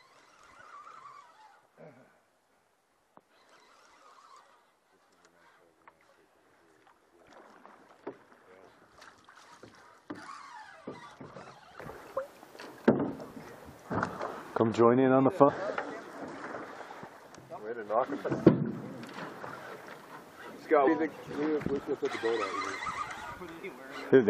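Compressed frames skipped at 11.78, 13.90, 15.48 to 15.50, 18.24, 20.86 to 20.88 and 23.63 s: the sound leaps forward past missing or rejected 23.2 ms frames, losing roughly half a second at 11.78 s and around 100 to 200 ms at the others.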